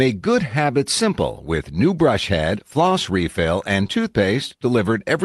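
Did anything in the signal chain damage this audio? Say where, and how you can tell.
Yes. At the network and jitter-buffer stage, there is a short concealed packet loss from 3.87 to 3.90 s, right after "head floss refill and". About 20 ms of audio never arrived in time. The decoder, which sounds like Opus, filled the gap by extending the preceding sound, then crossfaded back into the received signal. That gives a brief smeared blip in the speech.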